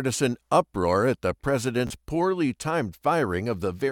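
Speech with one Bluetooth stutter from 1.87 to 1.90 s, between "uproar at the" and "poorly timed". About 29 ms of audio went missing, likely a couple of dropped packets, so the receiver replayed its last slice before the audio jumped ahead.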